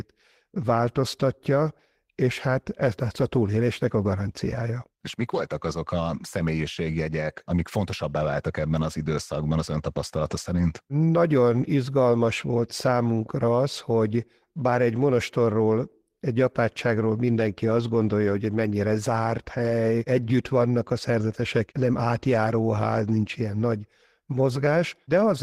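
Speech recording, no audible technical faults.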